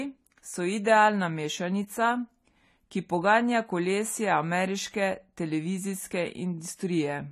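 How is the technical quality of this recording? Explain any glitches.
The recording is compromised by clearly audible lossy coding across the whole speech clip. AAC compression, throughout: the sound is dull with nothing above 14 kHz, and sibilants turn fizzy and smeared. That suggests the encoder likely ran short of bits, which fits AAC-LC at around 32 kbps, dropping the top band and leaving coarse spectra in each frame.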